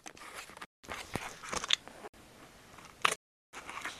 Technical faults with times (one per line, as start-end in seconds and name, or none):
0.65-0.84 block of digital silence
2.08-2.14 block of digital silence
3.16-3.53 block of digital silence